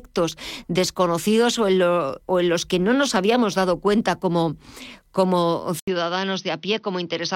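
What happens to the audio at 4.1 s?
Nothing goes wrong at 4.1 s: the speech continues intact through that moment, with no dropout, click, glitch or other fault to be heard there.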